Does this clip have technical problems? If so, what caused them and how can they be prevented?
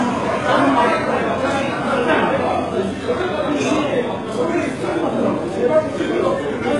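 Yes. HE-AAC compression runs throughout, with nothing above 11.3 kHz and a gritty, metallic treble that fits a very low bitrate near 12 kbps. The likely cause is spectral band replication, which copies lower bands upward, so the rebuilt top end no longer matches the original harmonics. To prevent this, encode at a higher bitrate or use a full-band codec.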